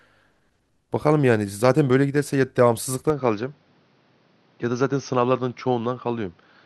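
At 3.1 s the speech abruptly loses its top end, and it stays that way to the end. Nothing above about 6.4 kHz gets through. The voice turns duller and boxy. There is no gap at the change, and the loudness stays roughly the same. A faint new noise floor appears, roughly 40 dB below the speech. The likely cause is an input switched to a poorer device partway through the recording, with a narrower band and a different background.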